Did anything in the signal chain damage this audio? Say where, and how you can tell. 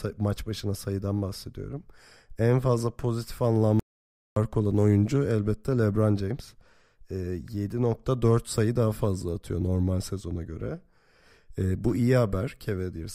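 Yes. An audio dropout to silence runs from 3.80 to 4.36 s, after "fazla pozitif" and before "olan oyuncu elbette". That is 0.57 s of silence. The likely cause is lost input at the capture stage.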